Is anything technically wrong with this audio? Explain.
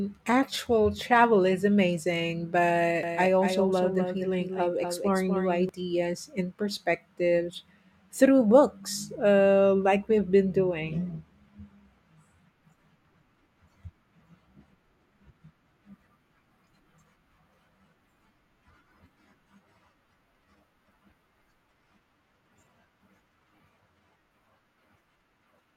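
Yes. From 3.03 to 5.69 s, just after "actual travel is amazing", there is a doubled audio track: a second copy of the speech, roughly 5 dB quieter, trails by about 200 ms. This is likely a slower capture path or a misaligned edit. It sounds like a dry, flat echo that starts and stops abruptly, and a spectrogram shows every syllable repeated as a fainter full-band shadow shifted right.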